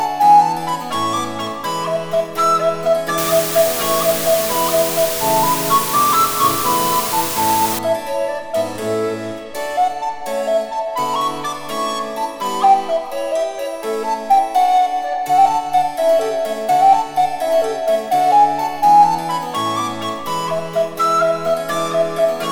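From 3.18 to 7.79 s, the audio is reduced to a low bit depth with dither: the signal is rounded to just 4 bits, with random dither added first so the rounding error comes out as steady white noise rather than distortion. A constant, even hiss sits over the sound for that whole stretch, only about 5 dB below the signal, so it nearly matches the sound in level while the sound itself stays clean and undistorted beneath it.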